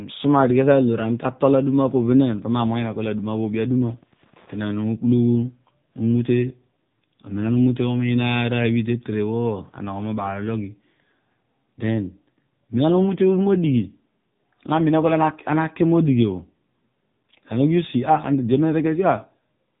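AMR narrowband mobile codec, throughout the clip from the start: the speech has been squeezed through the narrowband mobile speech coder, which rebuilds the voice from a vocal-tract model excited by a handful of pulses in each short sub-frame. Nothing survives above 3.8 kHz, so the sound is dull and boxy, and the low bit budget, which fits the 7.95 kbps mode, makes the coding damage plainly audible as a buzzy, synthetic edge on the voice.

Wi-Fi interference, from 1.83 s to 5.30 s: a nearby Wi-Fi radio's transmissions are being picked up and rectified by the audio circuitry, turning radio bursts into audible clicks. The beacon repeats every 102.4 ms, so it comes through as a steady ticking close to ten times a second, sitting faintly beneath the speech, roughly 35 dB down.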